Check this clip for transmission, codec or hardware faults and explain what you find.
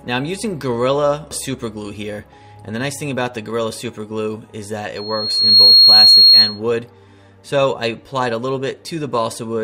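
One fault is present: loudspeaker feedback squeal, from 4.95 to 6.60 s. A mic-to-speaker loop exceeds unity gain at 4.3 kHz. That tone swells over about 0.7 s, ending about 15 dB above the sound.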